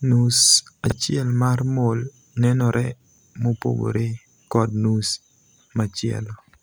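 At 0.86–0.92 s, just before "mar 'mole' nenore mopogore", and at 3.10–3.18 s, between "mar 'mole' nenore" and "mopogore kod nus", chunks are out of order: a 20 ms chunk plays two, then three chunks late. Unlike a dropout, nothing is missing; the sound briefly jumbles at the hard joins.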